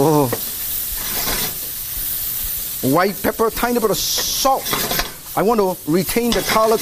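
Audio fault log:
No audible faults detected.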